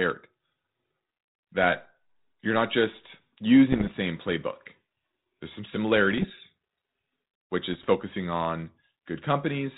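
Right after "that you're not just", from 3.72 to 3.96 s, there's a burst of bit errors on an ADPCM link. Each flipped bit knocks the decoder's step size and predictor off, so the damage rings on as rough crackle with jumpy level. It comes back more lightly at 6.11 to 6.30 s and 7.72 to 7.87 s. Error rates look around a percent or under, on band-limited G.726 that sounds like 32 kbit/s.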